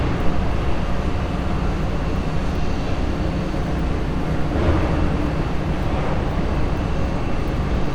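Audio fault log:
Nothing to log here, as no faults turned up anywhere in this audio.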